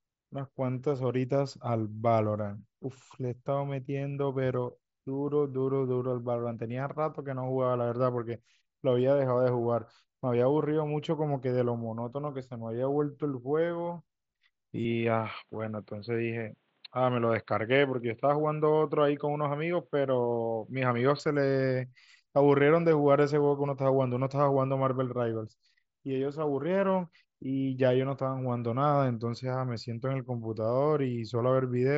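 From 14.85 s to 21.19 s the speech turns dull and boxy, with nothing above 4.4 kHz, no gap at either edge, unchanged loudness and a faint new noise floor. The likely cause is an input switched to a poorer device, after which the clearer source returns.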